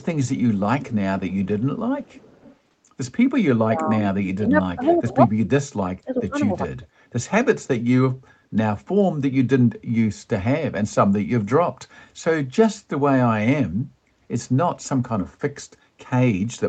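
From 0.80 to 1.46 s a faint delayed copy of the speech trails the talker by 407 ms, sitting about 20 dB below it, and it returns more weakly from 2.06 to 2.56 s at about 30 dB down. This is echo leak: the far end is likely playing the call on a loudspeaker, and its echo canceller failed to remove everything its microphone picked up, so part of the audio came back.

Between 3.64 and 5.19 s the talker's level sags in patches, dropping by as much as about 25 dB over roughly a second in total. This is speech suppressed in double talk. Both sides were talking at once, and the echo canceller likely could not separate the near talker from the loudspeaker echo, so it attenuated both. Inside that stretch, from 4.84 to 4.97 s, a short burst of echo leaks through again at about 15 dB below the speech, with the same 407 ms delay. The same ducking comes back more mildly, at about 15 dB, from 6.04 to 6.37 s and in a brief dip from 6.81 to 6.86 s.

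From 13.92 to 14.03 s the room sound drops out by about 14 dB for roughly a tenth of a second and then recovers. This is background gated by the echo canceller. While the loudspeaker was playing, the canceller clamped the microphone down hard, and it released once the canceller let go. Throughout the clip the audio contains nothing above 8 kHz, which fits normal call microphone processing.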